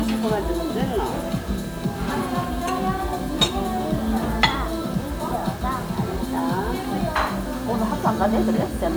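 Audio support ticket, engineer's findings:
Low bit depth without dither, throughout. Grainy distortion tracking the signal, quiet passages gritty, error about 25 dB below signal. Likely 7-bit rounding without dither in the conversion stage.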